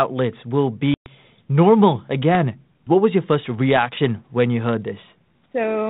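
Packet loss on an ADPCM call strikes at 0.94 to 1.09 s, cutting about 120 ms of speech, roughly seven packets, into a hard-edged silence. The decoder's adaptive predictor and step size then no longer match the sender's, so the speech re-enters mistracked before settling.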